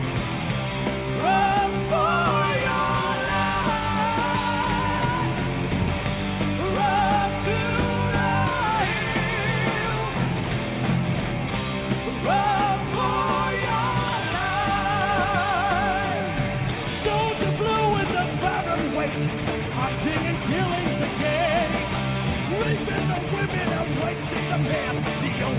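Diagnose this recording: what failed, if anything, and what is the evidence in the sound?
Nothing has gone wrong as far as I can hear: the audio just has the character of a call path, with nothing above 4 kHz, which fits a G.711 mu-law link running at 64 kbps.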